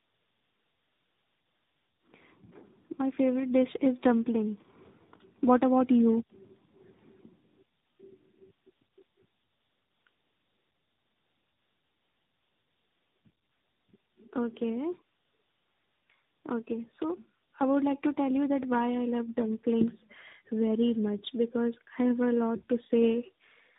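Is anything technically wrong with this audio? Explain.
Yes. Tandem speech coding runs through the whole speech clip. The sound seems to have been decoded and re-encoded by three speech coders in a row, which fits an AMR-NB, G.726, AMR-NB chain. Each stage compresses the previous stage's errors, so the roughness, muffling and warble build up. On a spectrogram, energy stops sharply at about 3.8 kHz, and harmonics look smeared and blotchy. The waveform looks grainy, and the speech sounds rough and noisy.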